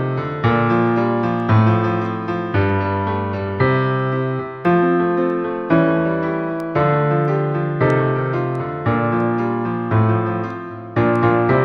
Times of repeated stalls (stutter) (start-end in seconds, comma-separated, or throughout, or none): none